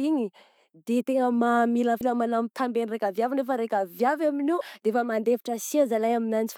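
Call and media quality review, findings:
Damaged data in a compressed stream, two short glitches in the speech at 2.00 s and 4.60 s. Probable component: decoder input. Corrupt frames lose sync until the next header. Spectrogram shows thin broadband vertical smears. Waveform shows brief discontinuities.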